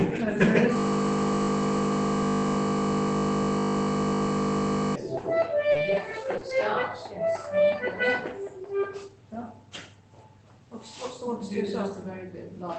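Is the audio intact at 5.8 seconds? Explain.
No. From 5.71 to 5.77 s there is short concealed packet loss: about 40 ms never arrived in time, so the receiver extended the preceding sound and then crossfaded back. It is heard as a brief smear or wobble. On a spectrogram the last sound stretches out flat and blurred before the real pattern resumes.

Overlapping the end of that gap (5.75 to 5.77 s) and again at 5.87 to 5.89 s, a lost packet was rebuilt from error correction. Each 20 ms stretch was replaced by a low-bitrate copy carried in the next packet. These frames sound rougher and hissier, and they appear as grainier, noisier patches in the spectrogram.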